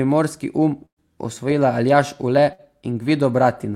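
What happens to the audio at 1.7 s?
Nothing goes wrong at 1.7 s; the speech plays through that moment intact, with no dropout, click, distortion or glitch.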